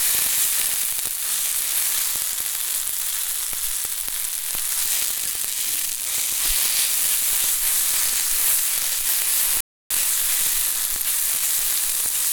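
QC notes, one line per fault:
9.61–9.91 s, playback stall: the sound cuts out mid-flow and the output goes silent for 0.30 s before audio returns. The gap is a dead stop rather than a fade, likely because the player's buffer ran dry or its output thread was blocked.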